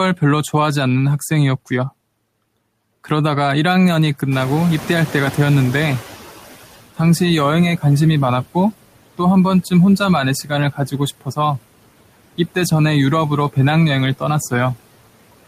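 Throughout the speech, noise suppressor artifacts appear: the background sinks by about 18 dB between words and returns underneath them, unlike a steady noise floor. From 4.31 to 6.33 s the noise suppressor is catching up. The room noise jumps by about 13 dB around 4.5 s, passes through with only about 11 dB of reduction, then fades over roughly two seconds as the estimate adapts, rather than staying loud. From 10.73 to 11.0 s the noise suppressor cuts speech, taking some speech for noise and dipping it by up to about 12 dB for a little over a tenth of a second, so that part sounds swallowed rather than dropped out entirely.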